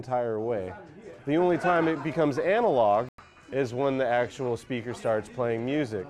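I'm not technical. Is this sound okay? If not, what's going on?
No. At 3.09 s a digital broadcast dropout occurs: the receiver lost usable data, likely about three frames, and muted. The sound cuts out for roughly a tenth of a second, returning at 3.19 s.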